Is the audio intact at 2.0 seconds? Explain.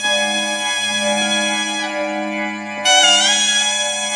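No. A wrong sample rate affects the whole clip, including 2.0 s. The sound plays 1.5 times fast and about 7 semitones high, which fits 16 kHz audio played at 24 kHz.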